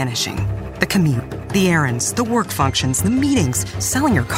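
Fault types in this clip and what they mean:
Bluetooth SBC bit pool drop: The wireless link came under pressure and the sending device cut the SBC bit pool sharply, to roughly half its earlier allocation, consistent with a fall from about 28 to 13 and a stream near 102 kbps. Starved of bits, the highest sub-bands were left nearly empty and the remaining bands coarsely quantised, so from 2.41 to 3.42 s the treble goes dull and a gritty roughness rises, clearing once the rate recovers.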